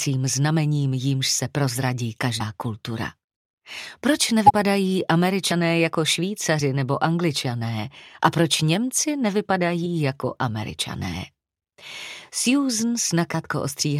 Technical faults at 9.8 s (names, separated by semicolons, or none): compressed frames skipped